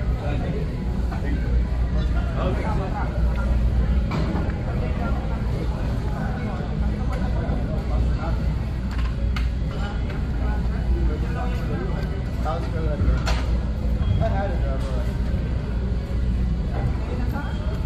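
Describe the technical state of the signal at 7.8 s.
Nothing at 7.8 s points to a technical fault; the signal is intact at that moment.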